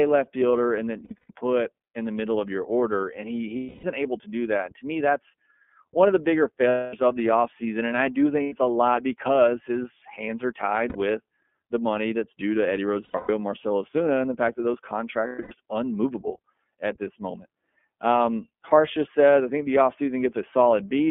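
Speech sounds muffled, band-limited to roughly 200 Hz to 3.4 kHz, with a plainly rough, synthetic edge. This is the iLBC codec's narrowband coding, fitting its 13.33 kbps, 30 ms-frame mode. Seven times the sound turns into a held, buzzy, breathy vowel before snapping back clean: 1.04–1.32 s (after "left fielder and that", before "put in the middle"), 3.57–3.84 s (before "able to do that"), 6.69–6.94 s, 8.43–8.53 s, 10.89–10.95 s, 13.05–13.30 s, and 15.27–15.52 s (between "the fact that those" and "unmovable at this moment"). These are lost iLBC frames, 60 to 270 ms of missing audio, some scattered in runs up to about a tenth of a second. The decoder fills each gap by repeating the last pitch cycle mixed with noise.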